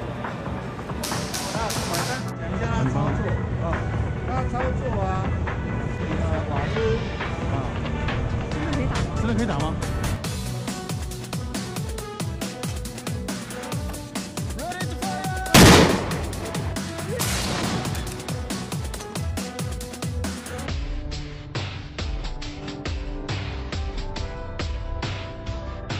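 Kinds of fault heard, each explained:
Section at the wrong speed: from 20.67 s to the end of the clip at 25.99 s, the final stretch plays at half speed, so everything takes twice as long and the pitch drops by roughly ten semitones at the same moment. The sound turns deep and sluggish, with its timing and pitch changing together. The likely cause is an editor or player fitting this portion to a clock running at half the correct rate.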